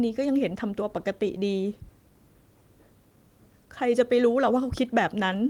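No technical faults can be heard in the speech. The Opus voice compression runs in its fullband hybrid mode at 24 kbps, leaving only light coding traces and content reaching up to about 20.1 kHz.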